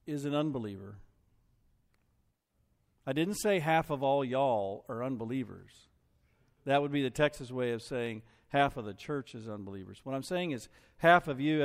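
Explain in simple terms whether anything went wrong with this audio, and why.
Three quick clicks in the speech give it away. They're dropped samples: the stream skips a tiny sliver, a fraction of a millisecond, so the waveform jumps straight to a later value and you hear a sharp tick. The first lands at 4.04 s, right after "didn't say half of"; the next at 7.20 s, after "would be the"; and the last at 8.06 s, after "way of". Nothing audible is lost, just those clicks, likely from brief hiccups in the audio stream.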